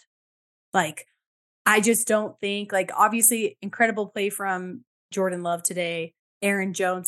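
No technical faults are audible anywhere in this recording.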